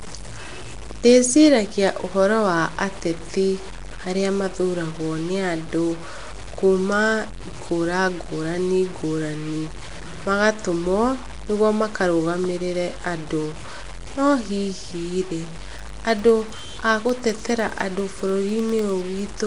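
This speech recording is grainy and coarse from start to finish, the grit following the voice and growing harsher as the speech gets quieter, with quiet stretches sputtering or falling to silence. The error sits only about 20 dB under the speech, which fits roughly 6-bit samples made by truncating without dither. That is likely low bit depth without dither. On a waveform the samples sit on a few visible steps, and a spectrogram shows broadband distortion that rises and falls with the speech rather than a steady noise floor. Over the same whole duration the speech also carries a rough, hissy halo and a smeared, underwater quality. Nothing is present above 10.6 kHz, and weak bands seem filled in with noise, which fits a bitrate around 44 kbps. The cause is Nellymoser compression, the old Flash microphone codec coding short fixed blocks with very few bits. On a spectrogram this appears as a hard ceiling at 10.6 kHz and blotchy, noisy patches between the harmonics. 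From 15.69 s to 19.39 s, regular ticks recur every 0.1 s, around forty of them, each a tiny gap of silence only a fraction of a millisecond long, heard only while speech is sounding. The likely cause is periodic USB or driver dropouts, a background task stalling the audio path on a fixed schedule. A spectrogram shows evenly spaced thin vertical lines, and zooming the waveform reveals the brief flat gaps.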